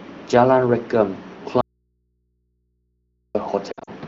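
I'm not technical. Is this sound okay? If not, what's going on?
No, there are two problems. From 1.61 to 3.35 s the speech suddenly vanishes for almost two seconds, and all that's left is a faint low hum sitting far beneath where the voice was. That's an audio dropout to a faint residue: the sound got cut off mid-flow, but the line after the break stayed open, so you hear the hum it picks up rather than true silence. The likely cause is a connection or input briefly losing the signal.

Then from 3.71 to 3.90 s the voice stutters and warbles in short bursts, with the worst break lasting about 60 ms. These are lost AMR speech frames. This is a phone-style HD Voice call, and when small chunks of speech arrive damaged, the decoder fills the gap by repeating the last good sound at fading volume, which smears and dips the voice. The pattern fits around six missing chunks spread over that stretch.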